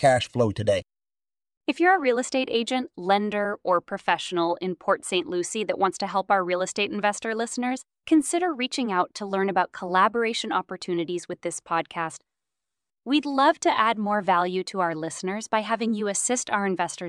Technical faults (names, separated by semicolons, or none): none